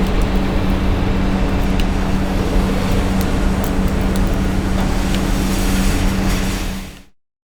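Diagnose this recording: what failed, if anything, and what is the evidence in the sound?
Nothing failed in this recording; the sound just fades out smoothly from around 6 s to 7.16 s, as an editor would shape an ending.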